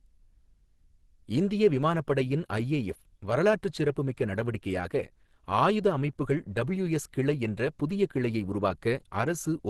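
Throughout the clip the speech has a muffled, hoarse quality with a grainy, rough texture in place of clean detail, and nothing is present above about 12.2 kHz. This points to Opus compression as the likely cause. The encoder appears to be running in its hybrid speech mode at super-wideband, which fits a low bitrate in the region of 16 kbps. Band energy is preserved, but fine structure is replaced by folded or noise-filled content, so the damage is plainly audible rather than swirly.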